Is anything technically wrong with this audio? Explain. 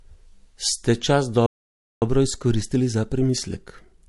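Yes, there are three faults. Throughout the speech there is audible codec damage, likely MP3 compression. The sound has a watery, swirly texture. This fits a low bitrate around 48 kbps, where the encoder cuts the treble and drops weak frequency lines frame by frame. Unlike plain low-pass filtering, the damage flickers and smears.

From 1.46 to 2.02 s the output goes completely silent for about 0.56 s, mid-flow. This is likely a playback stall, where the player ran short of data or was blocked. Unlike a cut in the recording, the speech resumes afterward.

From 2.02 s to the end, the speech runs hurried at about 1.15 times normal speed. This is time-compressed catch-up: the player trims small pieces and cross-fades them to clear its backlog. Pitch stays normal, which separates it from a simple sped-up playback.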